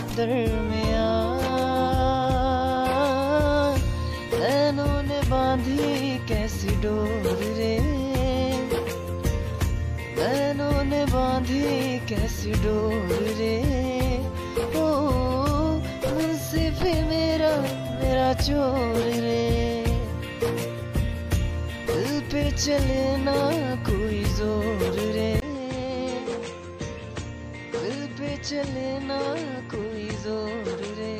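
At 25.4 s, after a 20 ms gap, the sound turns dull, cut off above 8.4 kHz, slightly quieter, with a faint new hiss. This is likely an input switched to a poorer device, not a filter.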